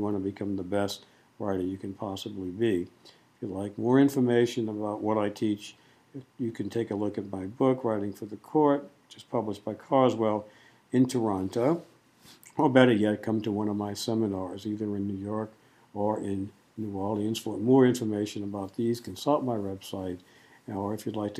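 Timecode bleed runs through the whole sound: a faint chirping warble, roughly 45 dB down, flipping between pitches near 1 and 2 kHz. Its frame-locked rhythm fits 23.976 fps linear timecode leaking from an adjacent track or cable, unlike a steady single-tone whine.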